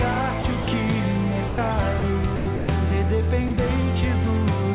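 Seven brief gaps, at 0.42 s, 0.62–0.66 s, 1.48–1.58 s, 2.00 s, 2.36–2.46 s, 2.56–2.68 s and 3.48 s, each lasting 20 to 120 ms, replace the sound with steady comfort noise. This is likely sound dropped by the voice detector, which judged those moments to be background and stopped sending. The telephone-band call path carries nothing above 4 kHz.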